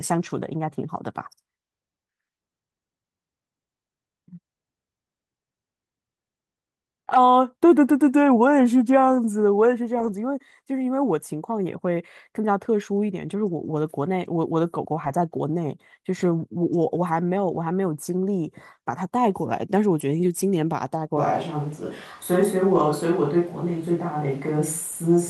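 Packets were lost three times in this speech recording, and each time the following packet's in-band error-correction copy filled the hole, so the audio never drops out. At 9.99–10.09 s (about 60 ms, fitting a few packets), 15.03–15.09 s and 22.75–22.81 s (about 40 ms each), those low-bitrate copies make the sound briefly rougher and noisier. From 21.17 s to the end, the signal likely switched to a distant microphone, replacing the close one. The sound turns abruptly roomy and hollow, with thinner bass and room noise around 30 dB below the speech, while the overall level stays about the same.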